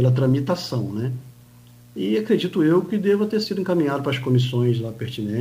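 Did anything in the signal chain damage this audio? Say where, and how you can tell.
No, no stage of the chain audibly damaged this audio.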